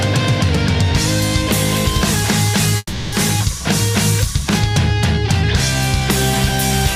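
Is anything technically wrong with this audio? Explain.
Yes. From 2.77 to 3.14 s there is a call audio freeze. For about 350 ms the last sound is stretched into a fading buzz or hiss, ending in roughly 30 ms of silence. The likely cause is delayed packets emptying the jitter buffer. Playback then resumes where it stopped, nothing lost but running about 350 ms later.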